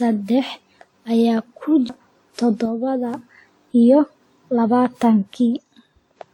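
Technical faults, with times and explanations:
Throughout, generation loss: speech sounds swirly, hollow and smeared with blurred attacks, likely from about seven passes through a 96 kbit/s WMA-type lossy codec.
1.89 s, CD skip: a tick and a brief mute of about 10 ms as the pickup jumps to another turn of the spiral, so playback resumes elsewhere.
2.66 to 3.14 s and 5.57 to 6.16 s, one channel drops out: level falls abruptly by about 6 dB, likely because one stereo channel was lost before the mono sum.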